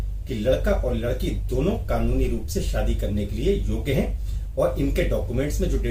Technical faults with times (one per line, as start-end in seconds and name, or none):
none